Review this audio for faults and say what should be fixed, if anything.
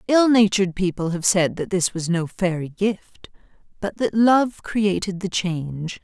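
Nothing in this audio needs to be fixed, as no faults can be heard.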